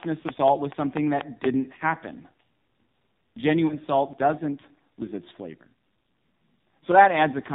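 AMR narrowband mobile codec damage runs through the whole speech recording: everything above 4 kHz is gone, and the voice sounds buzzy and synthetic, which fits a heavily squeezed low bitrate of around 5.9 kbps. A train of clicks runs from 0.03 s to 1.45 s, with about seven evenly spaced pops at roughly 4.1 per second, peaking about 15 dB above the speech. They are likely caused by interference or a faulty connection. Lost AMR speech frames occur at 3.68 to 3.78 s, where a brief dip or warble fits one missing 20 ms frame that the decoder patched by reusing its last pitch and vocal-tract settings at reduced gain.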